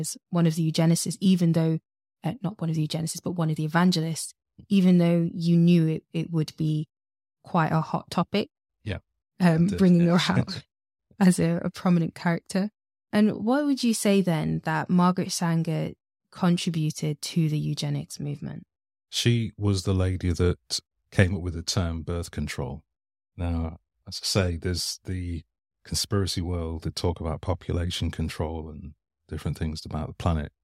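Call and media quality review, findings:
No faults found in the speech recording. Nothing to log against any component in the call or media path.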